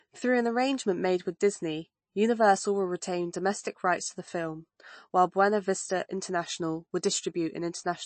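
Throughout, the speech sounds watery and swirly, with nothing above 8.3 kHz. This is likely MP3 compression, whose starved bitrate, fitting 32 kbps, forces a treble cut.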